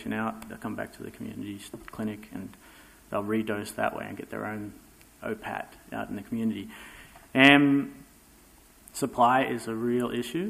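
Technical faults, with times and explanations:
Nothing here stands out as a technical fault; there's nothing worth flagging anywhere in the clip.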